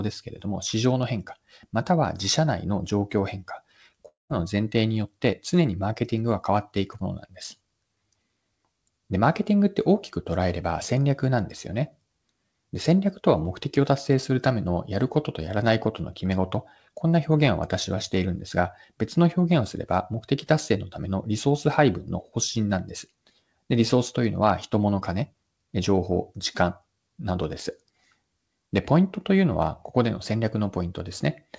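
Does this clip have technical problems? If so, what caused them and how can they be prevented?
Yes. At 4.08 s the speech breaks off, and the last sound drags on as a fading buzz. By 4.31 s it has thinned to about 0.16 s of silence. Then the speech resumes with roughly 0.22 s simply gone. This is likely a long network dropout. Packets stopped arriving, so the receiver stretched what it had and then went quiet. The G.722 call audio, with nothing above 8 kHz, carries on around the gap. A more stable connection, such as a wired link instead of congested Wi-Fi, would prevent it.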